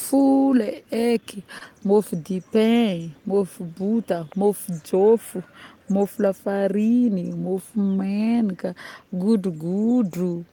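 Speech clip with scattered short gaps between 1.01 and 1.99 s: about four brief dropouts, none much beyond 30 ms, each patched by extending the preceding sound. Together they cover roughly a twentieth of a second, heard as small ticks and hiccups from lost or late packets.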